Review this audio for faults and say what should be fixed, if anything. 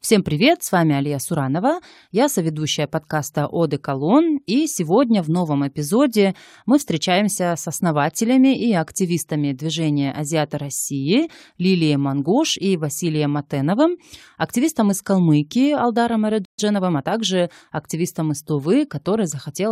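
At 16.45 s the speech cuts to silence for about 130 ms, most likely a playback stall, and resumes where it stopped.

From 16.58 to 17.11 s, time-compressed catch-up hurries the speech to 1.25 times speed to clear the backlog; pitch stays normal, unlike a simple speed-up.

A deeper playback buffer and a player thread that cannot be blocked would prevent the stall and the catch-up that follows it.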